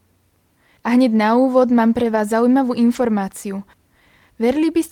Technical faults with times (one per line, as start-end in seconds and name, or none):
1.99-2.17 lost packet rebuilt from error correction
2.95-3.01 lost packet rebuilt from error correction